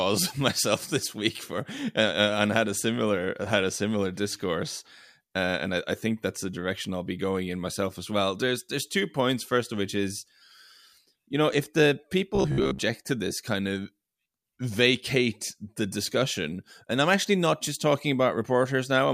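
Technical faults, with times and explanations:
12.35 to 12.79 s, robotic sound from repeated short buffers: for just under half a second the speech turns into a stiff, metallic buzz pinned at about 66.8 Hz. The likely cause is new audio arriving too slowly, so playback keeps looping the last chunk instead of waiting. A 66.8 Hz buzz fits a chunk of roughly 15 ms, and about half of this stretch sounds like repeats rather than fresh audio.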